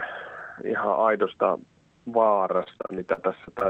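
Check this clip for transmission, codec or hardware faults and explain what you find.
One transmission fault appears, near the end: repeated packet loss (robotic sound) from 2.57 to 3.63 s. Ten short holes, the longest 40 ms, are each patched by extending the preceding sound, so about a fifth of that stretch turns choppy. The rapid succession of small patched gaps distinguishes it from a single long dropout. The call codec's top end stops around 8 kHz throughout.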